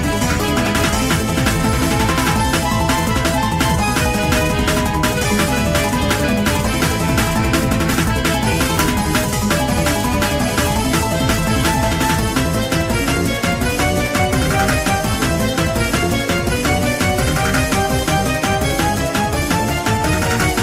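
The audio has a skip ahead at 8.77 s: about a second and a half of material is missing, with both sides spliced directly and no fill, as audio was dropped in transit or by an overflowing jitter buffer while later audio was already waiting.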